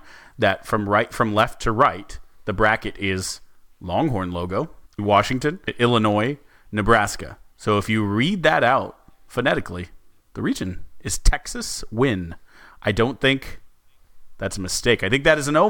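At 1.38 to 1.42 s, between "that from right from" and "to right the bracket", a wireless microphone noise hit cuts across the speech as a brief swish of static lasting about 45 ms. The analogue FM radio link faded for an instant as reflected signals cancelled, letting receiver hiss surge up over the voice. Unlike a digital dropout, which leaves silence or a hard gap, this fills the moment with rushing noise.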